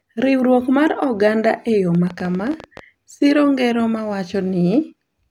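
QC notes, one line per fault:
1.95–2.80 s, train of clicks: roughly fifteen sharp, similar ticks, about 14.2 per second at uneven spacing, peaking about 5 dB above the speech, likely nearby-equipment interference.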